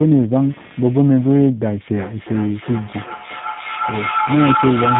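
From start to finish there's computer activity noise: a buzzy, scratchy pulsing running at around 200 times a second, sitting roughly 30 dB under the speech. It's the machine's load swings leaking into the audio ground, so it tracks the computer rather than the talker.

The whole clip also carries tandem speech coding. The speech sounds rough, muffled and warbly, with nothing above 3.8 kHz. That fits three speech codecs stacked in a row, ending on something like G.729A at 8 kbit/s, each one re-encoding the previous one's damage.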